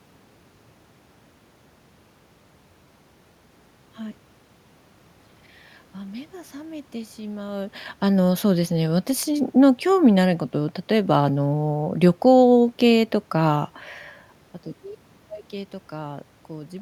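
No technical faults occur anywhere in this recording.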